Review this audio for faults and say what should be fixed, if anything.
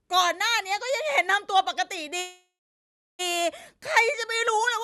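A call audio freeze runs from 2.19 to 3.21 s. Sound trails into a fading buzz, then 0.69 s of silence, and resumes about 1 s late with nothing lost. Delayed packets likely emptied the jitter buffer. Fix it by stabilising the network path and allowing a deeper adaptive jitter buffer.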